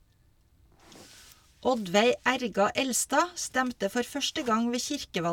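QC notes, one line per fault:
No faults detected.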